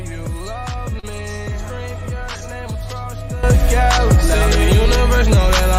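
At 0.99 to 1.05 s, short concealed packet loss: 40 ms never arrived, and 34 ms were patched by extending the last sound. It smears briefly. At 3.43 s, a sudden gain jump of about 13 dB lifts sound and background together until the end, likely an unramped digital gain change.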